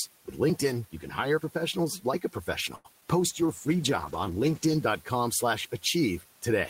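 At 2.75 to 2.87 s there is a short stall from a late packet. A packet arrived late, so the receiver held the last sound for 92 ms. Nothing is lost, but that sound drags with a slight buzz or dip.

From 3.01 to 3.03 s comes a short concealed packet loss. About 20 ms never arrived, and the gap was patched by extending the preceding sound. It leaves a quick smear.

From 3.2 to 4.91 s there is a call bitrate drop from 32 to 13 kbps, held at its lowest for 1.63 s. The encoder had far fewer bits, so the speech turns rough and coarse.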